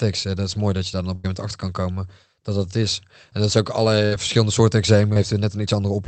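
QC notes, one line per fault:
1.15–1.26 s and 4.06–4.14 s, burst of packet loss: Just after "je daar dan op", the last sound is stretched into a held buzz or fading hiss for about 84 ms. After "dat is ook", the same happens for about 57 ms, and the speech resumes at "verschillende soorten". Several consecutive packets failed to arrive in time, so the receiver extended and faded the last audio it had. The roughly 80 ms and 60 ms of speech in those gaps are lost.
5.14–5.17 s, short concealed packet loss: Right after "verschillende soorten" there is a brief smear or wobble lasting about 19 ms, where a short sound can drop out. Around 20 ms of the call reached the decoder too late. The receiver covered the gap by continuing the preceding sound, then blended back into the real speech. That is why it is heard as a momentary blur rather than a clean break.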